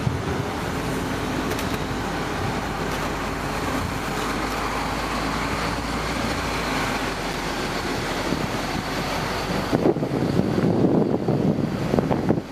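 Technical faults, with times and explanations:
3.87–4.26 s and 7.31–7.39 s, loose connector crackle: a worn contact repeatedly makes and breaks, chopping the signal into irregular bursts of scratchy crackle.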